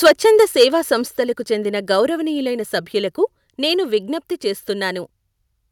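Right at the start, from 0.04 to 0.65 s, the speech has a harsh, crackly edge on its loudest bits. That's microphone overload, likely from input gain set about 11 dB too hot, so about 4% of samples get their tops flattened at the converter.

At 0.08 s, during that distorted stretch, the whole level (voice and background together) drops suddenly by about 2 dB. It happens again at 1.08 s, by about 4 dB, and once more at 4.14 s, right after "సభ్యులకు నేను", by about 1 dB. Those sound like microphone volume stepped down, likely the call software turning the input down in single steps because it judged the mic too loud.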